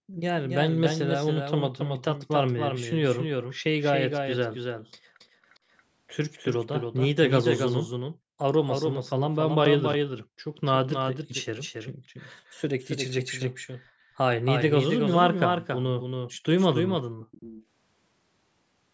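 From the first moment to the end, the speech carries a doubled audio track: a second full-band copy about 5 dB quieter trails the original by roughly 300 ms. It most likely comes from a second capture path or an edit holding two copies out of step. Each syllable gets a dry, flat repeat with no room tail. On a waveform every burst has a smaller twin about a third of a second later. On a spectrogram each harmonic stack appears twice, offset in time.

Background gated by the echo canceller hits at 0.0 to 0.2 s, 5.0 to 5.13 s, 5.29 to 5.42 s, 10.28 to 10.39 s and 17.09 to 17.28 s. The canceller clamped the microphone while the far-end loudspeaker played, so the room sound briefly vanishes, by about 40 dB at its deepest and only about 14 dB at 5.29 s. The waveform's noise floor flattens to near-silence in short notches. The spectrogram shows clean vertical gaps in the background haze below the 8 kHz ceiling left by the call processing.

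Echo leak follows at 5.49 to 5.58 s, 5.77 to 5.82 s and 17.21 to 17.65 s. At these times a faint delayed copy of the speech, 354 ms late, slips back, likely because a loudspeaker-side echo canceller failed to remove all of it. The first two are barely-there scraps about 35 to 40 dB down. The last, about 20 dB down, is an audible ghostly repeat. The spectrogram shows faint harmonic traces trailing the real ones.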